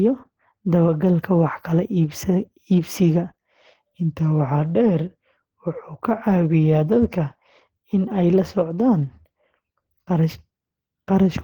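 From the start of the speech to the end there's plainly audible codec damage, most likely Opus compression running at a low rate; the texture points to something around 16 kbps in the hybrid speech mode. The band still reaches about 20.1 kHz, but with so few bits the upper bands get filled in rather than coded properly, leaving the speech muffled, hoarse, grainy and a bit rough throughout.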